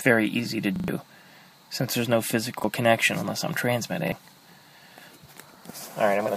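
Repeated buffer at 0.76 to 0.88 s, then 2.6 and 4.08 s: audio arrived late, so a roughly 40 ms piece, fitting a 40 ms buffer, replayed, stuttering three times first, then once, losing about 100 ms, then 40 ms each.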